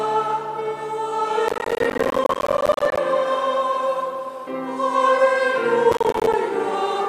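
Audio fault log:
1.48–2.98 s and 5.92–6.34 s: processor overload crackle. Repeated missed deadlines on buffers of roughly 10 ms leave dozens of hard-edged silent gaps, heard as gritty crackle. The waveform shows dense dropouts, and the spectrogram shows vertical broadband streaks.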